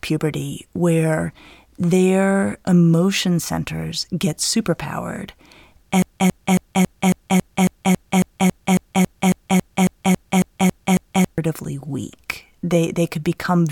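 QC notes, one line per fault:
6.02–11.38 s broken-record loop: one 0.27 s speech fragment repeats identically 19 times without decaying, unlike echo; likely a stalled stream resending it.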